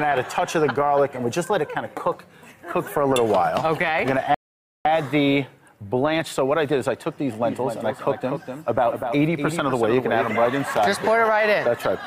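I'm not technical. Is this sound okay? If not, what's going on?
No, there are two problems. At 4.34 s the sound stops dead and stays silent until 4.85 s, then carries on exactly where it left off. That's a rebuffering stall: the player ran out of downloaded audio and waited for more, adding about half a second without losing anything.

From 7.44 s to 10.48 s a second copy of the same sound plays about three tenths of a second behind the first, noticeably quieter, clean and with no echo-like fade, cutting in and out abruptly. That's a doubled audio track, likely from the sound being captured twice along a slower path, or an edit leaving two misaligned copies.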